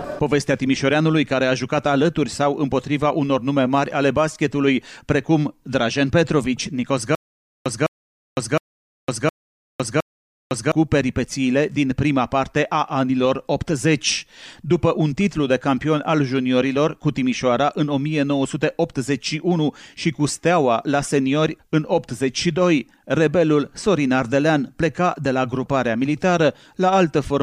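From 7.15 to 10.72 s there is a stutter with silent gaps: a 206 ms burst of sound repeats five times, each followed by 507 ms of digital silence, giving a steady 713 ms cycle. This likely reflects a stalled player replaying its last fragment at each retry, losing the audio in between.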